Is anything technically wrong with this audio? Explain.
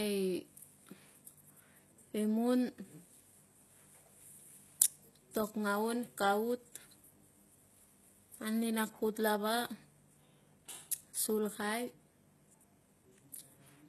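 Yes. Throughout the speech, likely HE-AAC compression at a very low bitrate, around 16 kbps, rebuilds the treble from copied lower bands, leaving nothing above 12.3 kHz and audibly gritty, lispy s sounds.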